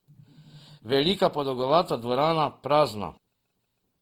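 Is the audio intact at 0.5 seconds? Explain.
No. Opus compression runs throughout: bands starved of bits, likely from CELT-mode encoding around 24 kbps, get filled by folding and noise while keeping their energy, making the speech grainy and rough.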